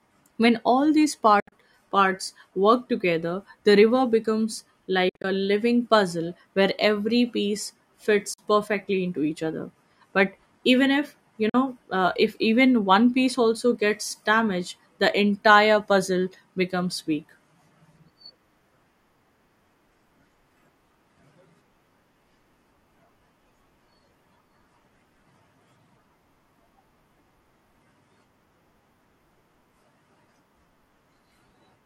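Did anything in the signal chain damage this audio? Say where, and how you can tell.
Yes. Speech cuts to silence, with abrupt edges, at 1.40–1.52, 5.09–5.24, 8.33–8.39 and 11.49–11.55 s, likely Bluetooth dropout. The waveform shows flat gaps and the spectrogram shows full-band blank columns where packets missed playback.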